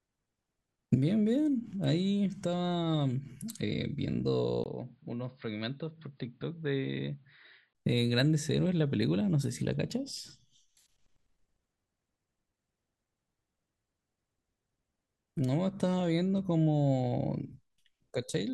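At 4.64 s there's a 20 ms dropout, and then the speech turns dull and boxy, with nothing above about 4.9 kHz. It also comes in a few decibels quieter, with a faint new noise floor sitting well under it. That fits an input switched to a poorer device, likely a different mic or a headset dropping into its narrowband call profile. At 7.75 s the full bandwidth snaps back, along with the original level and background.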